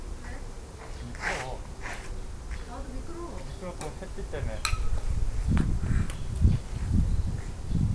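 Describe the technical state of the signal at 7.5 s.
At 7.5 s the signal is intact, with no dropout, clipping, distortion or other technical fault.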